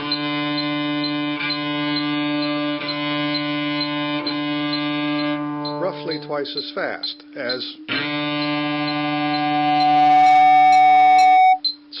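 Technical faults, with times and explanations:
8.54–11.61 s, loudspeaker feedback squeal: a steady tone at 748 Hz swells over roughly two seconds until it sits about 10 dB above the programme. That's the mic hearing its own loudspeaker, with loop gain topping one at that frequency, so it keeps feeding itself.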